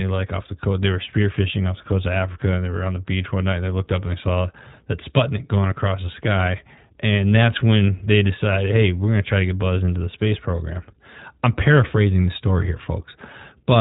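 Throughout, the speech carries iLBC codec damage: nothing passes above 3.8 kHz, giving a narrowband, telephone-like sound, and the plainly audible coding leaves it rough and synthetic. Each short frame's excitation is coded on its own, which fits 20 ms frames at about 15.2 kbps.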